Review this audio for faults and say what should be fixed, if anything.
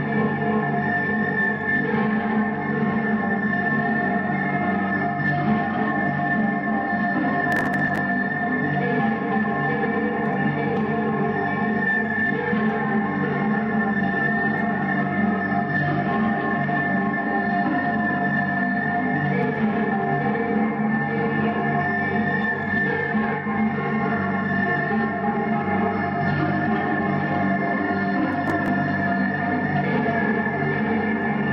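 Processor overload crackle at 7.52–7.98 s and again at 28.48–28.68 s: the processor missed run after run of very short buffer deadlines, under a millisecond each, and each miss dropped audio outright, so the gaps pile into gritty crackle. Give the audio thread more headroom with larger buffers or less concurrent processing load.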